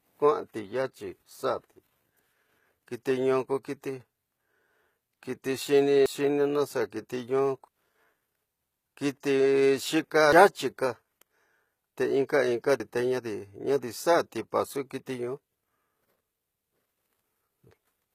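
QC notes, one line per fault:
throughout, HE-AAC compression: the speech carries plainly audible codec damage. The treble sounds rebuilt from copied lower bands rather than captured, so s sounds turn gritty or metallic. This likely comes from HE-AAC, and the sound fits about 20 kbps. A spectrogram shows blocky, repeated lower-band patterns above a crossover.
6.06 s, 7.68 s, 10.33 s, 12.8 s, dropped buffer (overrun): the speech jumps ahead with no silence in between. Roughly 300 ms is lost at each of the first three points and about 100 ms at the last, likely because samples were overwritten before being read. The waveform shows abrupt splices and the spectrogram shows vertical seams.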